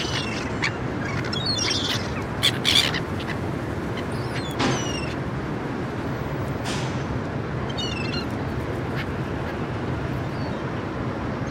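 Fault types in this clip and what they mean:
Clock slip clicks: faint regular ticks, about every 0.15 s from 0.18 s to the end, some seventy in all, most likely from two unsynchronised clocks differing by around 150 ppm, so a single sample is dropped or repeated each time the drift reaches one sample.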